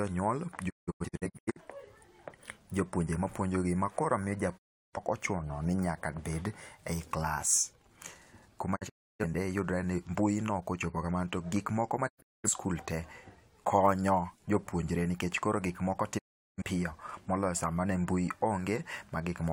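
Speech that keeps dropping into silence: the sound fades out over about 20 ms and mutes at 0.68 s (several short holes across 0.85 s, roughly half a second missing), 4.57 s (about 0.34 s), 8.75 s (broken holes, about 0.34 s lost), 12.08 s (about 0.3 s) and 16.17 s (about 0.38 s). This is digital broadcast dropout: the receiver lost or rejected frames and muted until clean ones arrived, so whatever was transmitted in those gaps is gone.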